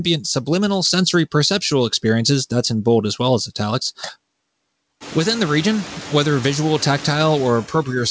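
Noise suppressor artifacts run through the whole clip. The suppressor pulls steady noise down by about 19 dB, so it dips between phrases and returns underneath speech, clearest once the room noise rises around 5 s.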